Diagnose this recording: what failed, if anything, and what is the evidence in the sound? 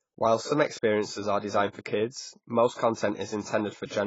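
The failure sits at the codec stage. The whole speech clip is dull and band-limited, with nothing above 7.6 kHz. Sibilants are smeared and sustained sounds take on a warbling, fizzy texture. The damage is heavy. The likely cause is AAC compression, AAC-LC at a low bitrate, which fits about 16 kbps. At that rate the encoder lowers its cut-off and starves the spectrum. The quantiser then leaves gaps and coarse noise in each frame.

There is a pre-echo from 2.74 to 2.78 s, just after "are designed for kids". A hiss runs for about 46 ms before the next attack. The attack itself lands soft and blurred. This is also a codec fault. The transform spreads its quantisation noise across the whole block. Noise sized for the loud onset therefore fills the quiet gap ahead of it, where nothing masks it.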